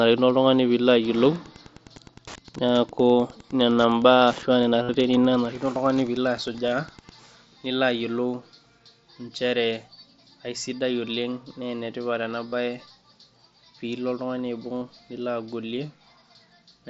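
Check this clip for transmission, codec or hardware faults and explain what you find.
Two faults are audible: Wi-Fi interference through the first seven seconds, and four concealed Bluetooth headset packet losses. The headset link runs through the wideband mSBC codec, which caps the audio at 8 kHz and adds a light grain on louder sounds.

Wi-Fi interference runs from 1.04 to 7.12 s, starting just after "pee ilo". A nearby Wi-Fi radio's transmissions are being picked up and rectified by the audio circuitry. The beacon repeats every 102.4 ms, producing a steady tick just under ten times a second. It sits roughly 25 dB below the speech, so it is quiet but continuous, with rougher rasps where data bursts fall between beacons.

Concealed Bluetooth headset packet loss occurs four times: at 4.83 to 4.89 s (60 ms), at 6.53 s (15 ms), at 12.48 to 12.52 s (45 ms), and at 14.76 to 14.82 s, where the losses are scattered over 60 ms with the longest gap 22.5 ms. 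When packets are missing, the receiver fills the gap by repeating the best-matching recent stretch of waveform. The 45 and 60 ms runs come out as a held buzzy tone at full level, with a slight warble as real audio resumes.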